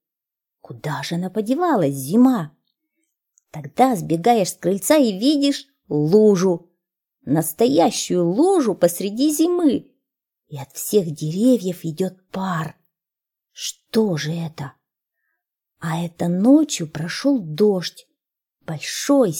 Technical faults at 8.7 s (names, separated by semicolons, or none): none